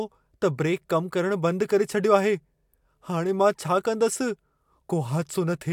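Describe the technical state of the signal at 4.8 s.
At 4.8 s the speech signal is intact, with no audible fault at that moment.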